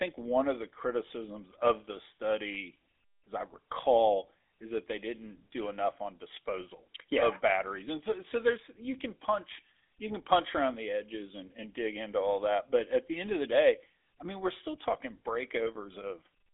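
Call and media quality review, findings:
Buzzy, gravelly roughness on the speech throughout, band held to 300 Hz–3.6 kHz. GSM full-rate codec: a vocal-tract model driven by sparse regular pulses, with the excitation cut to every third sample. Plainly audible damage that fits a 13 kbps full-rate stream.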